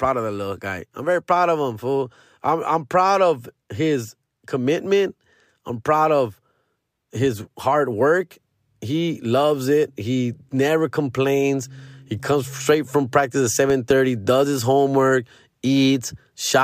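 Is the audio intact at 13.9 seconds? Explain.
No. Between 13.70 and 13.93 s, likely a sudden voltage pulse from a plug, switch or static causes a loud pop: two sharp thumps, a little louder than the speech, between "straight from practice at" and "does his homework".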